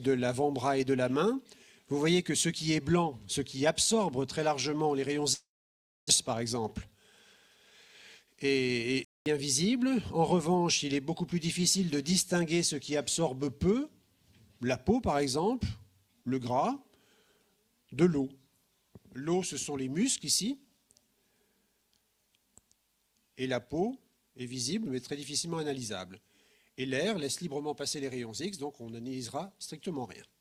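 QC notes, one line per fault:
5.33 to 6.11 s, long network dropout: the sound trails off into a fading buzz that the receiver synthesises from the last audio it had, then gives way to about 600 ms of silence before resuming further along, with that stretch simply gone. This most likely comes from packets failing to arrive. Unlike a stall, the concealment tail comes first and the sound does not resume where it stopped. The recovery leaves playback running roughly 150 ms later.
6.33 to 7.72 s, jitter buffer speed-up: just after the dropout the sound runs at about 108% of normal speed with its pitch unchanged, so it comes across as hurried rather than raised. The receiver is trimming short pitch-period-sized slices again and again to drain a buffer that filled up, removing around 100 ms in total. A resampling error would shift the pitch, and this does not, which is what sets it apart.
9.05 to 9.26 s, playback stall: the sound halts abruptly mid-flow for 215 ms of clean silence and then continues. 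That points to the player likely running short of data or having its output thread blocked. Compared with the network dropout, there is no decaying buzz before the gap, and the cut lands without any synthesised fill. That bare, hard break is what marks it as a stall on the playback side rather than lost packets.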